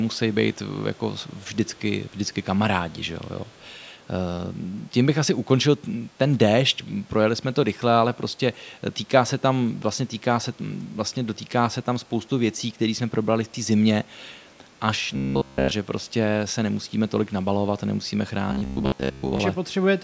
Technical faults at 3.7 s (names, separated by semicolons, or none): echo leak